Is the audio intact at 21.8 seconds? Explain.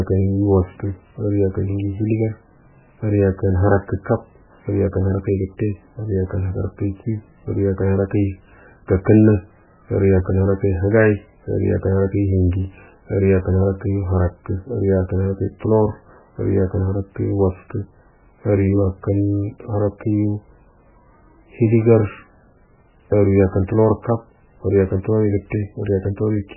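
No, at 21.8 s you're hearing the same damage that runs through the whole clip, and it sounds like heavy MP3 compression is the likely culprit. Nothing gets through above 3 kHz, so the speech is dull and boxy, and the upper detail goes watery and swirly as weak frequency lines flicker on and off between frames. The encoder cut the treble and dropped quiet components to save bits, which fits a starved bitrate of around 8 kbps.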